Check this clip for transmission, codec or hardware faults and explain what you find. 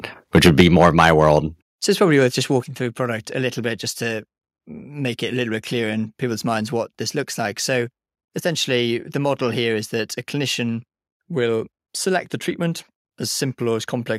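Two hardware-side faults are audible, both in the first three seconds.

Microphone overload, 0.35 to 1.37 s: peaks push about 9 dB past the converter's ceiling, likely from excessive input gain. Around 2 percent of samples are flattened, giving the loudest syllables a harsh crackle. On the waveform the tops are squared off, and the spectrogram shows broadband smearing.

Microphone volume stepped down at 0.61, 1.62 and 2.64 s: the level drops abruptly by about 4, 6 and 4 dB. This is likely the call software automatically cutting input gain after the clipping. The waveform envelope shrinks in clean steps.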